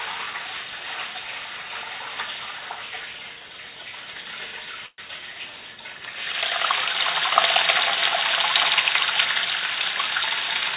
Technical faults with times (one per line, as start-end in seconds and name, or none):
4.86-5.00 call audio freeze